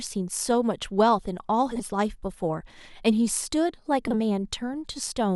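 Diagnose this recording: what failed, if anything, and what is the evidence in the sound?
Two brief garbled flutters, at 1.71 to 1.81 s and 4.07 to 4.17 s, with no time lost. These are frames out of order from the network: neighbouring runs of 40 ms and 30 ms were decoded swapped, exchanging each stretch's halves.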